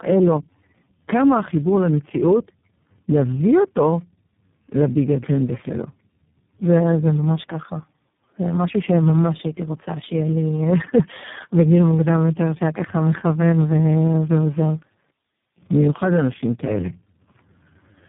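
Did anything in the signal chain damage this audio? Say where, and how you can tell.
Yes. Tandem speech coding affects the whole clip at the codec stage. The speech sounds rough, muffled and warbly, and nothing remains above 3.8 kHz. The damage fits three low-rate speech codecs in sequence, such as GSM full rate, AMR-NB at 5.15 kbit/s and iLBC, joined by G.711 links. At each border the call was decoded and re-encoded, so every coder modelled the previous coder's errors and the distortion accumulated.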